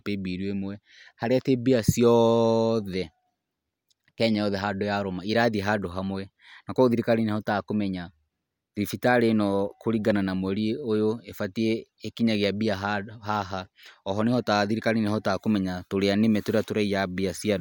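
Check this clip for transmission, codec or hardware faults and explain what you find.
Nothing wrong can be heard anywhere in this speech.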